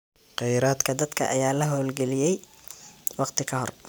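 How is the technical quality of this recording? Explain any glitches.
There's one clear glitch: a section at the wrong speed. From 0.85 s right through to the end, the speech runs about 1.12 times faster than it should, so it sounds rushed and sits roughly two semitones higher, a bit chipmunky compared with the opening. Speed and pitch shift together at that point, which is the signature of resampling rather than a deliberate time-stretch. The likely cause is that stretch of audio being played or rendered against a mismatched clock.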